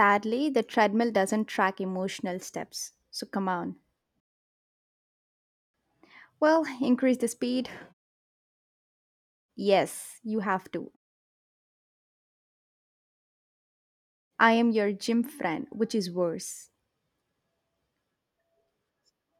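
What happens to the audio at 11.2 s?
At 11.2 s the audio plays through intact, with no dropout, glitch or distortion at that point.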